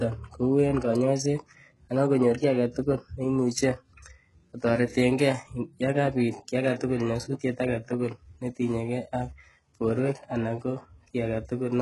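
HE-AAC compression damages this speech clip throughout: the sound stops at 11.5 kHz and the treble is gritty and lispy, likely from band replication at a bitrate around 12 kbps.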